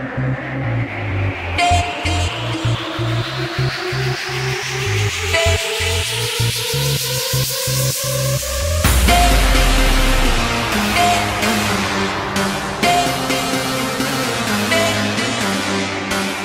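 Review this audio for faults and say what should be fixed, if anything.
Nothing in this audio needs fixing. No faults can be heard at any point, so there is nothing to correct and nothing to prevent.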